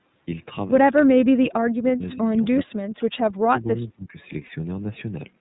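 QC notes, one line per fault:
Throughout: iLBC codec. The audio is narrowband, with nothing above 4 kHz, so sibilants and consonant detail are dull. The sound at 13.33 kbps has a plainly audible rough, slightly synthetic texture, because each 30 ms frame's excitation is coded on its own with few bits and no help from the previous frame. The call's microphone high-pass also trims the lowest bass, which is normal.
0.96–2.04 s, 2.65–3.10 s, 3.38–4.18 s: speech suppressed in double talk. In each window the level sags and breaks up in patches, totalling roughly 0.7 s, 0.4 s and 0.7 s, with the deepest dips about 30, 20 and 25 dB. High frequencies thin out and fragments drop away. This is the pattern of an echo canceller that likely could not tell the talker apart from far-end echo while both sides spoke, and so attenuated everything.
2.12–2.17 s: echo leak. A brief, faint copy of earlier audio surfaces about 20 dB below the speech, delayed by 234 ms. 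It is short, a scrap rather than a continuous echo. This is likely residual loudspeaker pickup that the far end's echo canceller failed to remove and sent back down the line, arriving after the round-trip delay.
4.46–4.50 s: lost iLBC frames. A 30 ms gap, consistent with a single lost frame, is filled with a held, faintly buzzy vowel-like tone. The decoder repeats the last pitch cycle mixed with noise. Because iLBC frames are independent, the voice is right again almost at once after the gap.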